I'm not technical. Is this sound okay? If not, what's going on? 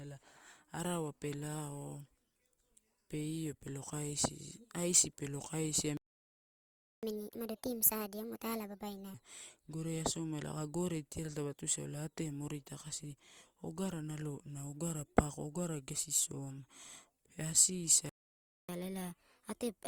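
No. The speech has two kinds of problem.

Playback stall: just after "pelo kaisia", the sound stops dead from 5.97 to 7.03 s, a gap of about one second. It happens again from 18.09 to 18.69 s, a gap of 0.6 s. Each is a break in the middle of the speech, not a natural pause. The likely cause is that the player ran out of audio data or was briefly blocked, so it output silence until it recovered.

Catch-up at higher speed: right after each stall, the player rushes through its built-up backlog by speeding the audio up, which also raises the pitch. From 7.03 to 9.14 s it plays at 1.5 times normal speed, with the voice raised by around seven semitones, then returns to normal. From 18.69 s to the end of the clip it plays at 1.25 times speed, raised by around four semitones.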